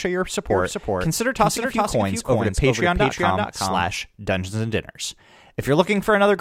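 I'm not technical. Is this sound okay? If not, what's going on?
No. From 0.50 s to 3.96 s, the speech has a second, somewhat quieter copy of itself trailing about four tenths of a second behind, so everything seems said twice. This is a doubled audio track. It is likely caused by the same sound being picked up a second time through a slower route, or by an edit leaving two copies out of step. The echo begins and ends suddenly rather than fading.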